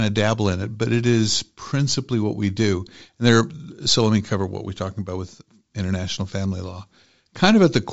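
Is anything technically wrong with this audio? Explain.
No, the speech comes through G.722 wideband telephone coding at 64 kbit/s working as intended, with content reaching up to 7.7 kHz and nothing above that.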